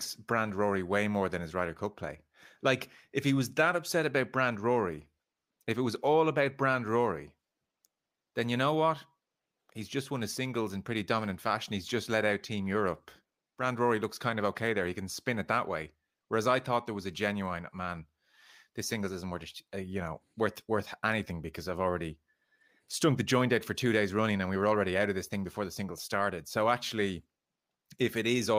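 Nothing in the recording stands out as a technical fault at any point, so there's really nothing to flag here.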